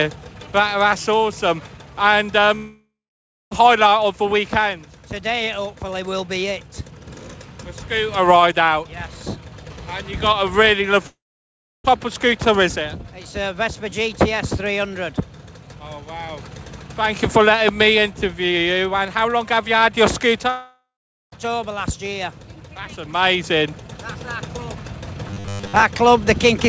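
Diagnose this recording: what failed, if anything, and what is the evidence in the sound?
Long network dropouts at 2.56–3.53 s, 11.07–11.99 s and 20.5–21.34 s: each time, the sound decays into a fading buzz and then drops to silence for roughly 0.6, 0.7 and 0.4 s. Audio resumes with about 0.8–1 s missing. This likely happened at the network stage, where packets stopped arriving and the receiver concealed the gap before giving up.

Robotic sound from repeated short buffers at 25.29–25.83 s: for most of this stretch, a rigid metallic buzz at 100 Hz replaces the natural sound. The likely mechanism is a starved jitter buffer repeating its last block, and the 100 Hz pitch fits a 10 ms block being looped while fresh audio is skipped.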